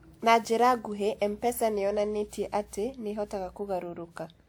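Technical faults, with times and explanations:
Throughout, generation loss: the speech sounds swirly, smeared and hollow, with consonant attacks blurred, though content reaches up to about 20.1 kHz, so the bandwidth itself isn't narrow. The likely cause is repeated lossy re-encoding, around seven passes, with a character that fits WMA at 128 kbit/s. Each pass requantises the signal on a shifted frame grid, so its noise and spectral holes stack up, making the sound worse than that bitrate alone would.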